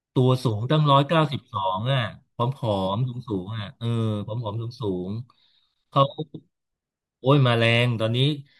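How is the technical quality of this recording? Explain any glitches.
No technical glitches can be heard anywhere in this speech recording. There is nothing in it that calls for an explanation.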